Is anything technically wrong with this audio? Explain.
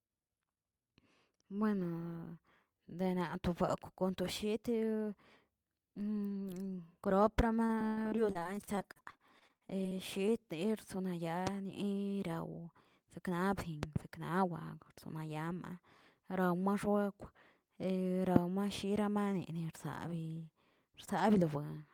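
Yes. The speech has two kinds of fault.

From 7.65 to 9.93 s there is repeated packet loss, heard as robotic sound. Audio data went missing again and again over this stretch. Each hole was patched by stretching the sound just before it, and the next hole arrived soon after. About a quarter of the stretch is concealed this way, and the longest gap is 100 ms. The speech turns choppy, with pieces missing. Unlike a pop, which adds something to the sound, this fault takes pieces away and smears what is left.

There are loud pops at 11.47–11.49 s, a close pair at 13.83–13.98 s, and another at 18.36–18.39 s. The first two stand out at about 20 dB above the speech and the last at about 25 dB. The likely cause is a sudden electrical pulse, such as a switch, static or a driver glitch, added on top of the signal. Each is a sharp, brief snap while the speech carries on intact underneath, which is what sets them apart from the dropouts.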